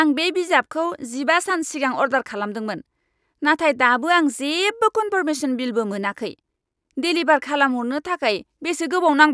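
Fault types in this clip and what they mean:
No technical faults can be heard in the speech recording, and the signal stays steady and continuous throughout.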